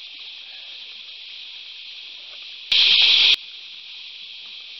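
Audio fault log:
2.72–3.34 s sudden gain jump: digital gain likely changed instantly without a ramp, so sound and background noise leap together by about 23 dB, then fall back.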